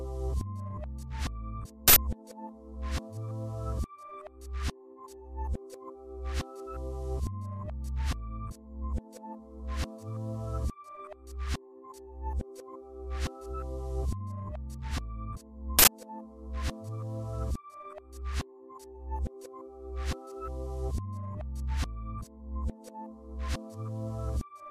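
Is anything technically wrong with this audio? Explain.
Yes. There are two uninitialised buffer bursts, at 1.88 s and again at 15.79 s, each about 85 ms long. Playback grabbed a buffer before any audio had been written into it, so whatever junk was sitting in memory got sent out as samples. You hear it as a sudden, harsh blast of digital noise that cuts straight across the sound. The 85 ms length fits a 4096-sample buffer.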